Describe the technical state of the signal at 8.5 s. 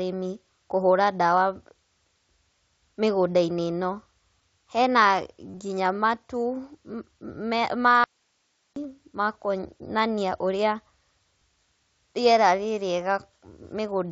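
At 8.5 s the speech is gone: from 8.04 to 8.76 s it cuts off abruptly, leaving only faint hiss roughly 45 dB down. This audio dropout to a faint residue likely comes from the signal being lost while the path after the break stayed live.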